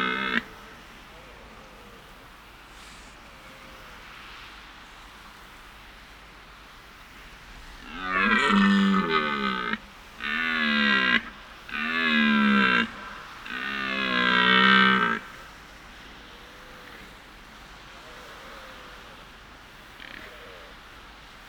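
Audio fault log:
Nothing to log here, since there's no technical fault to be heard anywhere in this audio.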